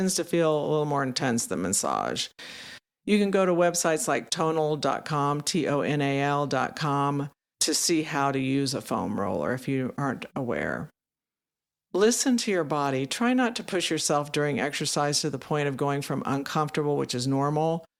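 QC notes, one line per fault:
Nothing to flag on this speech clip; no faults turned up anywhere in it.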